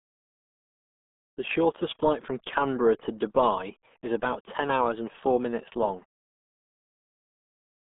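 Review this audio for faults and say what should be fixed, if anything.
The RealAudio 14.4 codec affects the whole clip: speech sounds muffled and gargly, with nothing above 3.7 kHz, consistent with a heavily compressed 8 kbit/s stream. Prevent this by sourcing or re-capturing the audio in a modern wideband codec at adequate bitrate.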